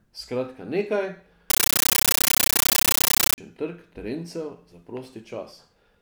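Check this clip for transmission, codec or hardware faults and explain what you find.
One fault: from 1.50 to 3.38 s the speech becomes a compressed stream played as audio. Undecoded data, consistent with an AC-3 bitstream, is output as raw samples. Each frame gives a 13.3 ms noise burst then silence, 31.25 times a second, heard as loud, chattering static.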